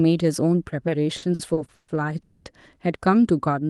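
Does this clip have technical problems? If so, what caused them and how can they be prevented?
Yes. Repeated stalls (stutter) run from 1.17 to 1.90 s. Packets arrived late, so the jitter buffer emptied five times. The receiver stretched the last sound across about 310 ms, with the longest gap lasting 140 ms. The speech drags but loses nothing. A larger adaptive jitter buffer and a steadier network path would prevent this.

A call audio freeze follows from 2.22 to 2.47 s. The last sound continues for 230 ms, and then the speech resumes where it stopped. The likely cause is packets being held up in transit, which left the buffer empty. Prioritising call traffic and reducing congestion on the link would prevent it.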